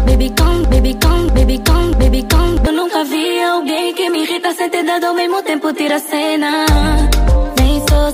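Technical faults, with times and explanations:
0.00–2.67 s, broken-record loop: the audio is already stuck when the clip begins, repeating a fragment of about 0.64 s exactly and back to back, three times, before normal playback resumes at 2.67 s. The identical repeats point to a stall in the player, encoder or stream, which likely kept resending the last fragment it held. Whatever should have played during those first 2.67 s is missing and is not recovered afterwards.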